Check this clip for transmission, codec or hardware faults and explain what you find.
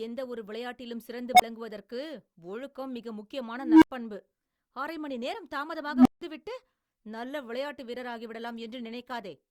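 The speech carries three unstable filter events, at 1.35–1.42 s, 3.57–3.91 s and 5.88–6.22 s. A recursive filter with bad coefficients feeds back on itself. Each time a tone swells until it clips and overflows, then the output drops to silence until the filter resets. At 1.35 s a tone of roughly 700 Hz builds over 49 ms, followed by 23 ms of silence. The later two sit near 300 Hz, building over 246 ms and 170 ms, then falling silent for 93 ms and 163 ms.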